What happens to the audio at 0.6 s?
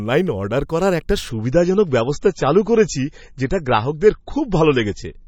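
Nothing goes wrong at 0.6 s; the speech carries on intact through that moment.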